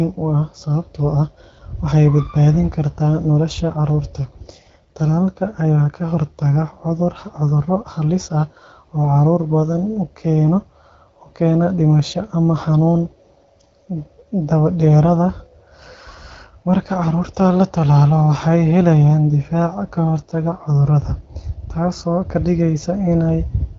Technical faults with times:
none

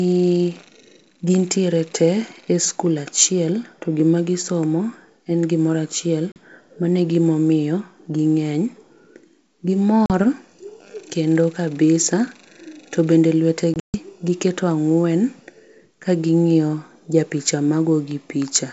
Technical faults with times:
6.32-6.36 packet loss on an ADPCM call
10.06-10.11 packet loss on an ADPCM call
13.74-13.96 packet loss on an ADPCM call

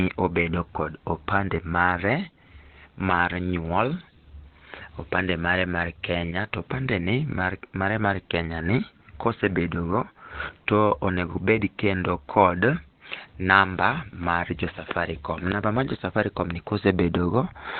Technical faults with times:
0.00-17.79 Opus compression

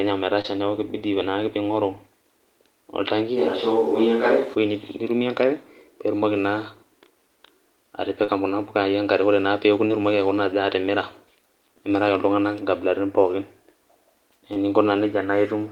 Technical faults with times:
0.41-0.46 short concealed packet loss
3.38-4.54 switch to a distant microphone
8.24-8.30 short concealed packet loss
9.88-9.91 short concealed packet loss
14.53-14.57 short concealed packet loss

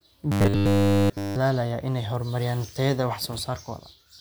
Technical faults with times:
0.32-1.36 robotic sound from repeated short buffers

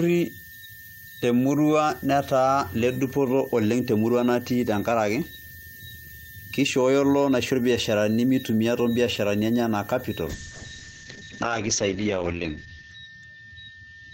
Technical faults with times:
10.31-14.14 call bitrate drop

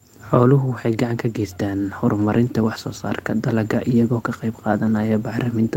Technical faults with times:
2.17-2.35 lost packet rebuilt from error correction

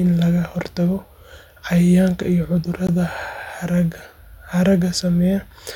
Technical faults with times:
2.87 gap at a join of encoded pieces

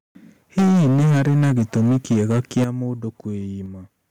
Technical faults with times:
0.58-2.64 microphone overload
0.59 microphone volume stepped down
2.64 microphone volume stepped down
3.66 microphone volume stepped down

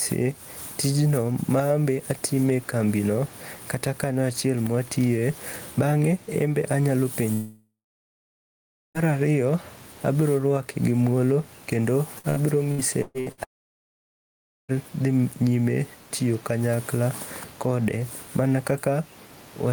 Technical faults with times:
0.00-19.72 gain pumping
7.33-8.97 long network dropout
12.18-13.40 repeated packet loss (robotic sound)
13.43-14.84 long network dropout

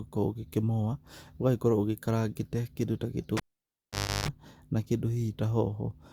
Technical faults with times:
3.37-4.28 cable pulled and plugged in

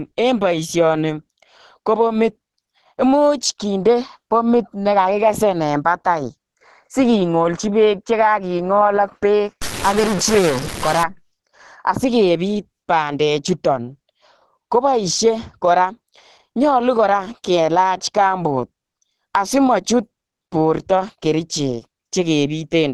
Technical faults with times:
0.00-22.93 Opus compression
9.62-11.03 stuck bit

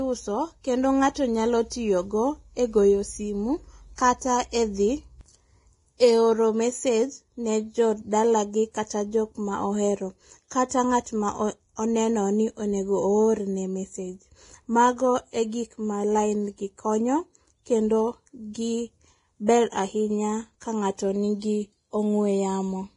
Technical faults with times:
0.00-22.96 Vorbis compression
3.95-3.98 pre-echo
19.46-19.49 pre-echo

